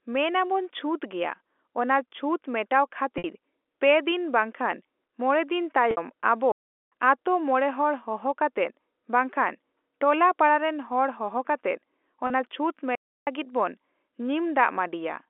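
At 3.18 s, between "ᱪᱷᱩᱛᱜᱮᱭᱟ ᱚᱱᱟ ᱪᱷᱩᱛ ᱢᱮᱴᱟᱣ" and "ᱯᱮ ᱫᱤᱱ ᱵᱟᱝ ᱠᱷᱟᱱ", there is packet loss with pitch repetition. About 60 ms of speech is missing. The receiver fills the gap by repeating the last pitch period. It sounds like a brief buzzy hold. The same happens at 5.91 s, also about 60 ms, which fits two lost packets. At 6.52 s a playback stall cuts the sound to silence for about 0.4 s. It resumes at "ᱟᱛᱳ ᱢᱚᱬᱮ ᱦᱚᱲ ᱦᱚᱦᱚ". The player likely ran short of data or its thread was blocked. At 12.27 s, after "ᱯᱟᱲᱟᱨᱮᱱ ᱦᱚᱲ ᱦᱚᱦᱚ ᱠᱟᱛᱮᱫ", a shorter loss of about 30 ms gives a briefer buzzy hold. At 12.95 s a second stall silences the output for about 0.32 s. The speech then continues. The narrow telephone band of the G.711 line can be heard throughout.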